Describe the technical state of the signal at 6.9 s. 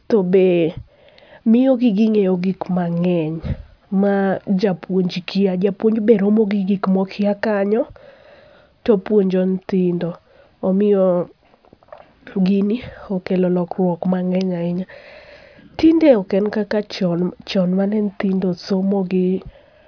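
At 6.9 s the speech signal is intact, with no technical fault present at that point.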